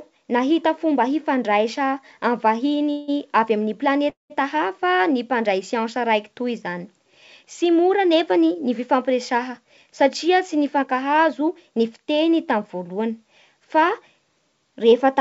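Speech over a call path, likely G.722 judging by how everything above 8 kHz is gone, and it has two call audio freezes and one jitter buffer speed-up. The first freeze runs from 2.91 to 3.10 s: the last bit of sound gets stretched into a fading buzz for about 170 ms, then the speech picks up right where it left off, so nothing is lost, just pushed later. The second, 4.10 to 4.32 s, fills about 200 ms, and most of that (160 ms) decays to plain silence before the audio resumes. Both sound like packets held up in transit, likely draining the jitter buffer so the receiver had to fill the gap. Then from 8.37 to 8.79 s, just before "fifampiresaha satria", the buffer is clearly catching up on the delay it built up. It snips out tiny pitch-period chunks, around 40 ms in total, so the speech runs at about 107% speed with the pitch unchanged and comes across as slightly rushed.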